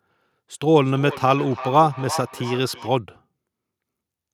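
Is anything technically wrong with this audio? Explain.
Yes. From 0.83 to 2.98 s the speech comes back at itself as a thin, ringing repeat trailing each word at a steady interval of roughly 300 ms, peaking about 14 dB below the speech. This is feedback echo between two devices. Two devices on the same call share a room, so one device's microphone picks up the other's playback and sends it round again. Each echo canceller only removes its own device's output, so the loop survives.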